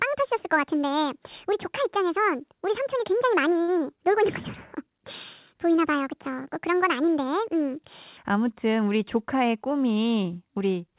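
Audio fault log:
0.00–8.17 s, section at the wrong speed: likely a clock mismatch ran this stretch at 1.57 times speed, raising pitch about seven semitones, so speech sounds high and hurried.
3.62–3.79 s, short stall from a late packet: a packet arrived late and the jitter buffer emptied, so the receiver stretched the last sound by 59 ms, holding it with a slight buzz or dip.
9.00–9.71 s, jitter buffer speed-up: an overfull jitter buffer trimmed short pitch-period pieces, roughly 70 ms in total, so speech runs at 109% speed with unchanged pitch and sounds rushed.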